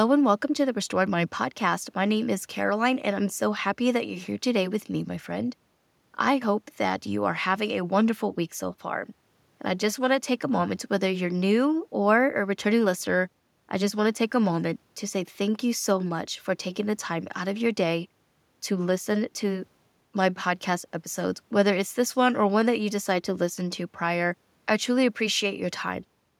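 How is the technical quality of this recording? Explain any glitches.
No glitches are audible in the speech; the only background is the room's own noise, sitting about 45 dB below the voice and belonging to the recording rather than the system.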